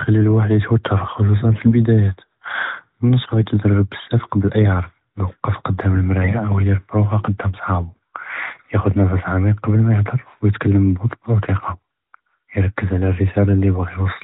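At 1.50 to 1.73 s, 3.24 to 3.46 s, 6.22 to 6.40 s and 8.46 to 8.68 s the speech turns briefly hoarse and gargly: AMR bit errors, where a few percent of the weakly protected bits in each frame were corrupted, misplacing the excitation pulses and skewing fine gain and spectral values. Pitch and level hold, but on a spectrogram the harmonics inside the narrowband AMR band below 4 kHz smear into ragged noise, and the waveform turns jagged.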